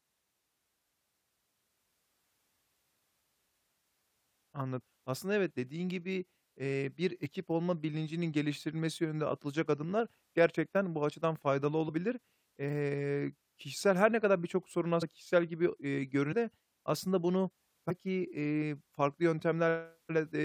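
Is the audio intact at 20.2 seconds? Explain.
Yes, at 20.2 seconds the speech plays through intact, with no dropout, click, distortion or other fault audible at that moment.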